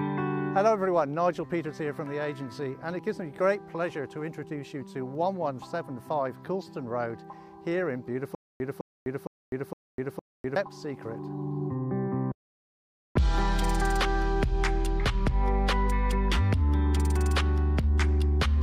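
From 8.35 to 10.56 s there is a stutter with silent gaps: a 208 ms fragment repeats five times, each followed by about 253 ms of digital silence, a 461 ms cycle. Likely a stalled playback buffer replaying its last fragment, losing the intervening audio.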